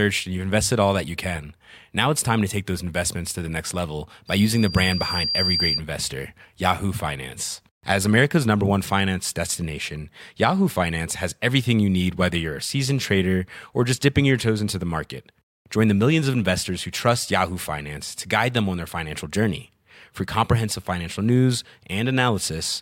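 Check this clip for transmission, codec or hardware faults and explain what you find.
There's one fault here, a loudspeaker feedback squeal. Right after "to the next level", from 4.27 to 5.81 s, a 4.7 kHz tone swells over about a second until it's roughly as loud as the speech. The mic is catching its own speaker, and the loop gain at that frequency tops one, so the tone keeps feeding itself.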